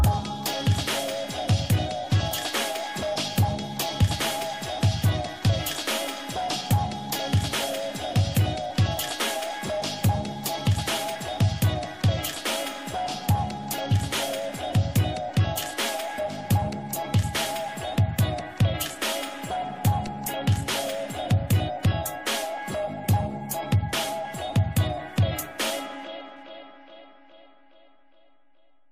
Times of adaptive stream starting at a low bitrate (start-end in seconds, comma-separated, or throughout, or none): none